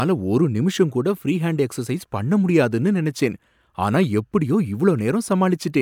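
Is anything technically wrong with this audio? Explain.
No technical faults are audible.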